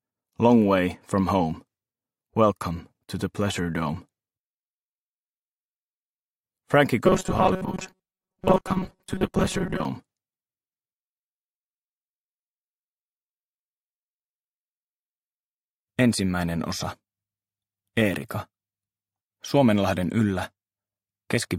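From 7.06 to 9.85 s, robotic sound from repeated short buffers: a rigid 188 Hz buzz, likely from 5.3 ms repeats replacing about half the audio.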